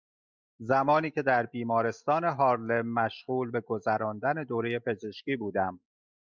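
Speech recording with no audible technical faults: no dropouts, clicks, distortion, level jumps or timing errors anywhere in the clip.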